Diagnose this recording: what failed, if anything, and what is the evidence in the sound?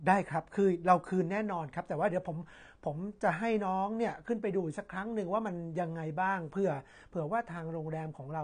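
Codec: the speech is dull and smeared throughout, with a spectrogram cut flat at 9.7 kHz. This is likely AAC compression, where a bitrate near 32 kbps forces that cut-off.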